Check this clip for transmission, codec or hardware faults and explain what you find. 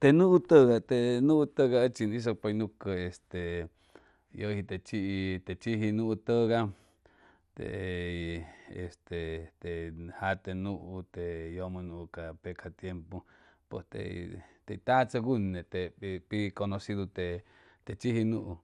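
One codec fault runs through the whole recording: MP2 compression, plainly audible from start to end. The speech sounds dull, with a gurgling, granular roughness. The likely cause is MPEG Layer II coding at a low rate, which fits about 80 kbps. This codec divides the signal into 32 equal sub-bands and shares a bit budget among them. When bits run short, upper bands drop out and the rest are quantised coarsely. That produces the muffled top and grainy texture heard here.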